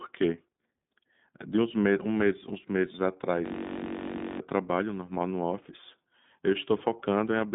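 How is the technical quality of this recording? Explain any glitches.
The recording is speech, and its technical quality is limited by two faults: narrowband codec coding throughout, and a hang loop near the middle.

From start to finish the audio carries iLBC codec damage. The codec encodes each 20 ms frame's excitation independently of the previous frame. The character fits its 15.2 kbps mode. The passband sits at roughly 150 Hz to 3.7 kHz, and nothing is present above 3.8 kHz, so the speech sounds muffled and telephone-like. The frame-by-frame coding gives it a plainly audible rough, slightly synthetic texture.

From 3.46 s to 4.40 s a system hang loop takes over. The host or driver stopped supplying new data while the sound hardware kept replaying its ring buffer. A 21.33 ms segment, which fits a 1024-sample buffer, repeats dozens of times at 46.9 Hz. Because the segment is so short, it comes across as a steady, pitched buzz near 47 Hz rather than a stutter. 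About a second of the original audio is lost under it.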